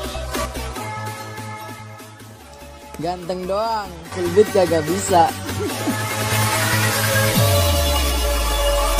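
The audio has two sudden gain jumps: about 5 dB from 0.32 to 0.45 s, and about 9 dB from 4.12 s to the end. Sound and background noise step up together instantly rather than ramping as a fade or compressor would. This is likely an unramped digital gain change.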